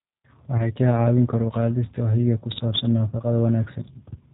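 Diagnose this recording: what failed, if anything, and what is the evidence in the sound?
G.729 codec damage, throughout, at the codec stage: the speech is band-limited below 4 kHz and sounds rough and synthetic, which fits an 8 kbit/s G.729A pulse-excited model.

VoIP packet loss concealed by the speech codec, 0.57 to 0.67 s, at the network stage: about 20 ms went missing, which suggests two lost frames. The decoder stretched the last pitch and filter into a fading buzzy tone or coloured noise, and the audio stayed weakened while the frames rebuilt.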